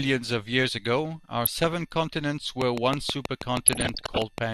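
From 1.44 to 1.73 s the speech is broken by short blips of noise as single frequency bands jump in level for up to a frame. This is DAB burbling: weak reception let bit errors, a few per thousand bits, slip past error correction and corrupt the MP2 audio data. From 2.62 to 4.39 s a train of clicks ticks at a regular 6.2 per second, about ten in all, each peaking around 20 dB above the sound. They are likely caused by interference from nearby equipment or a faulty connection or power supply. Inside that stretch, from 3.65 to 4.26 s, the DAB burbling returns for longer and somewhat denser, as bit errors rose to around half a percent.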